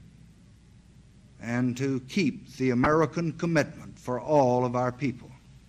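The audio carries plainly audible MP2 compression throughout. The top end sounds dull and closed in. Upper detail seems to flicker in and out. A granular, gurgling roughness sits on what remains. This is likely the work of MPEG Layer II coding at a low bitrate. The damage fits about 80 kbps. At that rate the coder cannot give bits to all 32 sub-bands. It switches upper bands off and quantises the rest coarsely. At 2.84 to 2.93 s there is a short burst of DAB burbling. A few brief watery blips rise over the sound and then stop. Bit errors have slipped past error correction into the audio data. Corrupted samples put short blips of noise in single sub-bands, and corrupted scale factors make sub-bands jump in level. The burst spans about 90 ms, which fits two damaged frames. It points to a very low error rate, well under a tenth of a percent.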